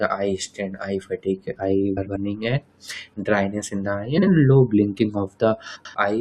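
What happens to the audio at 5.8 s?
From 5.75 to 5.95 s the speech has frames out of order: two adjacent blocks of about 93 ms each, consistent with runs of four frames, play swapped. The result is a brief garbled flutter, and no time is lost.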